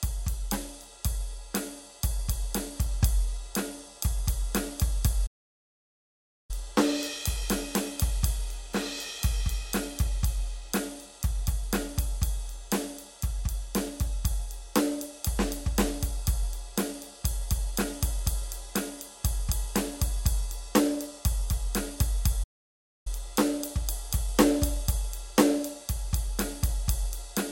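Music, interrupted by two playback stalls: the sound cuts to silence from 5.26 to 6.51 s (about 1.2 s) and from 22.43 to 23.07 s (about 0.6 s), likely the player starving for data or being blocked.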